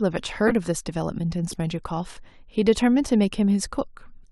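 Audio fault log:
0.47 to 0.53 s and 1.51 to 1.54 s, corrupt frame decoded: Each is a short burst of wrong sound. The first is loud, peaking around -5 dBFS, and the second is much quieter, around -20 dBFS. Damaged compressed data was still played, so misread gains and codes put energy at the wrong frequencies for the span of a few frames. On a spectrogram each appears as a brief block of stray energy cutting across the speech harmonics.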